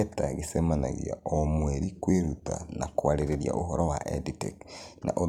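A speech recording with one fault. From 0.56 s to 2.55 s the speech slows by 5.56 percent and drops in pitch by 99 cents, almost exactly a semitone. At 2.55 s it snaps back to normal speed and pitch. Speed and pitch move together, which points to a rate change rather than a pitch effect. This is likely a drift correction step: clock-matching software altered the playback rate in one jump to rebalance its buffer, then released it.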